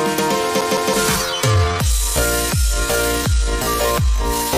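The audio has two faults. From 0.61 to 0.94 s it sounds like a CD stuck on one turn. A slice of about 162 ms plays, then plays once more. Each jump back brings a brief mute. The result is a quick, even stutter. This is how a scratched disc sounds when the laser falls back a track at the same point on each rotation. From 1.08 s to the end, the pace drops abruptly to about 0.68 times normal speed. The pitch does not fall with it. That points to a time-stretched section. The likely cause is software lengthening the audio to fill a set duration. It would keep the pitch by repeating small pieces rather than playing them more slowly.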